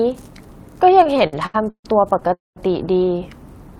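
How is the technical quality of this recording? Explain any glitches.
The speech is marred by two related network faults in the middle of the clip, both the kind you get when a call's audio arrives unevenly.

From about 1.03 to 2.31 s there are repeated stalls (stutter): eleven short hitches, the longest about 143 ms. The audio kept arriving late, so the receiver's buffer kept running dry and it stretched out the last bit of sound to cover each wait. That filler adds up to 357 ms, roughly a quarter of that stretch. Nothing's cut out, but the talker sounds like they're dragging and catching.

Right after, from 2.33 to 2.58 s, comes a call audio freeze. The sound hangs for 231 ms: a short smeared tail of the last sound, then about 180 ms of silence before the speech picks up exactly where it stopped. That's likely one longer hold-up on the way that emptied the buffer completely, which pushed everything after it about 231 ms later. 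Nothing is skipped, but you hear a clear dead pause that wasn't in the original.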